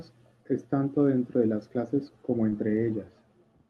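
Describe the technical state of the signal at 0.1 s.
At 0.1 s the speech signal is intact, with no dropout, distortion or other fault, only the ordinary coding character of the call path it travelled through.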